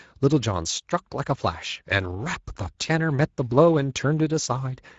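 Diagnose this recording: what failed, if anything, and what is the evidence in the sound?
The failure is at the codec stage. Speex codec damage runs through the whole speech clip, from start to finish. It is plainly audible. The speech sounds hoarse and grainy. Speex is a CELP coder. It models the vocal tract with a filter and spends its remaining bits on the excitation signal. With too few bits, that excitation is coarse. The character fits a mid-range setting near 16.8 kbps.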